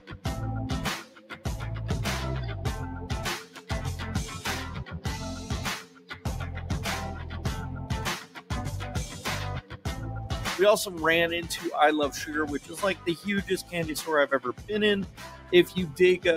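A noise suppressor applied to music or sounds runs throughout. A speech-tuned suppressor treats steady content as noise. Level swings by around 10 dB, so the sound pumps and thins.

The sound is cut by the noise suppressor at 0.00–0.25, 1.03–1.46, 3.44–3.70, 4.84–6.26, 8.23–8.51, 9.10–9.86, 12.60–13.07 and 14.53–15.52 s. Held parts sink by about 7 to 9 dB and tails shorten.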